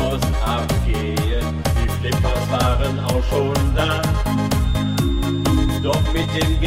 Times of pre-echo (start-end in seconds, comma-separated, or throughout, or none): none